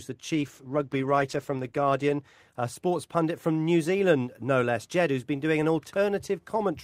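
From 0.34 s to 4.25 s there is a call bitrate drop. The bandwidth estimate fell, and the encoder went from 40 kbps down to 13 kbps, staying at its lowest for about 1.35 s. The speech turns coarse and muffled, with its upper frequencies gone, until quality returns just before "no less".

From 5.21 s to the end of the clip, a filter restarted on every block loses its state at each block boundary and begins again from silence. Each restart leaves a small click. The clicks repeat at 46.9 Hz, which fits a 1024-sample block, and merge into a low buzz that rises and falls with the speech level.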